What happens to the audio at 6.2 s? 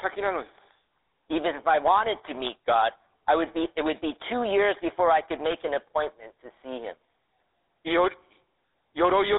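At 6.2 s the speech carries GSM full-rate codec damage, present for the whole clip rather than just that moment. The vocal tract is modelled and driven by sparse regular pulses, which fits a 13 kbps stream, giving a plainly buzzy, gravelly texture, with a 300 Hz to 3.7 kHz band and nothing above 3.8 kHz.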